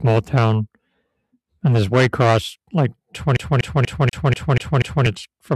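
From 3.37 s to 5.06 s the speech gets caught in a CD stuck on one turn. A scratch keeps knocking the laser back to the same spot, so a 242 ms slice repeats seven times, with a brief mute at each jump. You get that quick, even stutter.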